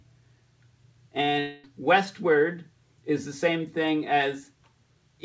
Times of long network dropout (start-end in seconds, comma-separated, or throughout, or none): 1.40-1.65